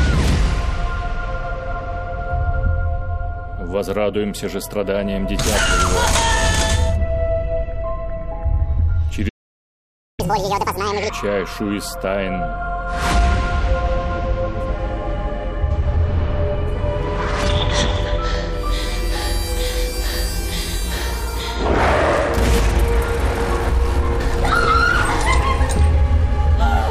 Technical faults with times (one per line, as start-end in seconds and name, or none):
9.28-10.20 playback stall
10.20-11.10 catch-up at higher speed